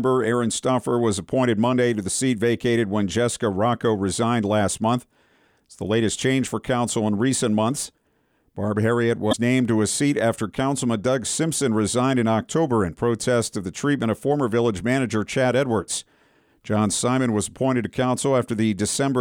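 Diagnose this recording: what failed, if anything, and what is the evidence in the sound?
At the codec stage, damaged data in the compressed stream produces a short glitch from 9.29 to 9.34 s. The decoder misreads corrupted frames and loses sync until it finds a valid header. On a spectrogram this shows as a brief disturbance, and on the waveform as an abrupt discontinuity.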